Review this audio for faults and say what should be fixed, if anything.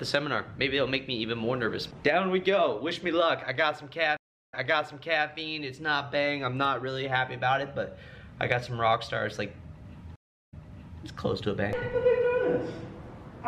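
Two stream reconnects occur, at 4.17–5.27 s and 10.16–11.03 s. Each time the connection dropped, the player went silent for about 0.35 s, then reconnected with a fresh decoder. The server resent buffered data, so the audio resumes 0.76 s earlier in the first case and 0.52 s earlier in the second, repeating a stretch already heard. Larger client buffering and resuming playback from the last decoded position would prevent the gap and the repeat.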